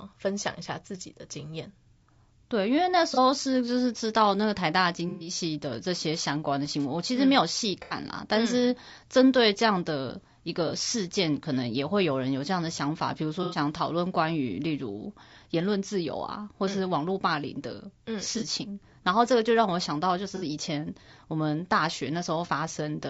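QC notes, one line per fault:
Throughout: low-delay AAC compression. The speech sounds rough and grainy, with noise filling the gaps between harmonics and a thin, synthetic top band. The cause is likely a low-delay AAC codec such as AAC-ELD, at a rate that fits about 32 kbps. Its short frames resolve pitch harmonics poorly. At this rate, too few bits remain to code them cleanly, and the damage is plainly audible.
3.14–3.18 s, 5.09–5.29 s, 7.82–7.96 s, 10.67–10.72 s, 13.43–13.57 s, 18.38–18.43 s, 20.36–20.44 s: AAC frame loss with concealment. Each gap lasts 30 to 120 ms. The longest is at 5.09 s, and those at 7.82 s and 13.43 s run 90 ms. The decoder fills each gap from the last good spectrum with scrambled signs or interpolated energy. So each one sounds like a brief smeared, noisy or phasey patch in the speech.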